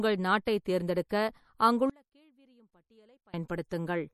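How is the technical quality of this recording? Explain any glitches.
The recording has clear technical problems: coding damage throughout, four moments of pre-echo, and a stretch where the sound nearly disappears.

MP3 compression is the likely cause of the watery, swirling quality heard across the whole clip. The encoder appears to have been starved of bits, which fits a low bitrate around 48 kbps, so weaker frequency components are dropped and return from frame to frame instead of being kept steadily. The damage is plainly audible on the speech, and nothing is present above 18.5 kHz, which points to the encoder's fixed treble cut-off.

Pre-echo occurs at 0.45 s, 0.65 s, 1.09 s and from 3.69 to 3.71 s. When a sharp onset lands late in a coding block, the codec spreads the quantisation noise meant for that loud moment across the whole block, including the quiet instant before it. Each of these onsets is therefore preceded by a short hiss lasting 11 to 20 ms, and the attack itself loses its crispness.

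One channel inverted is the likely explanation for the gap from 1.90 to 3.34 s. If one side of a stereo pair had its polarity reversed, the material common to both sides would cancel when they were combined into a single channel. Here the sound drops by about 32 dB, background included, leaving only a small residue until normal level returns at 3.34 s.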